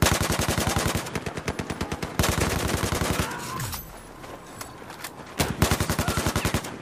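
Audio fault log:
Nothing stood out on listening to this audio.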